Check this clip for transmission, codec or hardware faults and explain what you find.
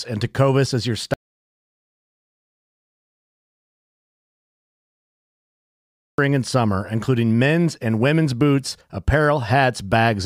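One fault is present. From 1.14 to 6.18 s there is an audio dropout to silence: about 5.0 s of the speech vanishes into silence, likely from a lost input link. The waveform shows a flat line and the spectrogram a blank band.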